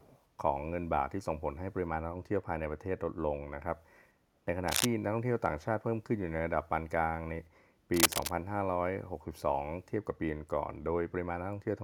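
From 0.00 to 0.24 s a faint echo leak is audible: a delayed copy of the speech trails about 435 ms behind, very quiet. This is likely a far-end loudspeaker feeding its microphone, with the echo canceller not removing all of it.

Cable scratch noise appears from 4.68 to 4.86 s and again from 7.94 to 8.31 s as dense, uneven scratching bursts, the first about as loud as the speech and the second louder, likely from a worn cable or connector being moved.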